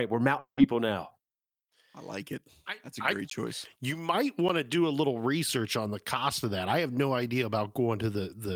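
From 0.39 to 0.59 s the speech smears into a buzzy, fading continuation of its last sound, which drains away into silence before the voice returns at 0.59 s, skipping ahead. This is a long network dropout. The audio stopped arriving, likely because packets were lost in transit, and about 180 ms of speech never played. The receiver filled the hole by extending what it last had, then gave up and went quiet.

Two sharp ticks follow, at 3.30 s and at 4.49 s. The second comes just before "to do a little". Each is a block of digital silence, where the signal drops straight to zero and snaps back with no fade. The first hole lasts about 15 ms and the second about 10 ms, so both register as brief pops rather than audible gaps. They are typical of an output buffer that was not filled in time.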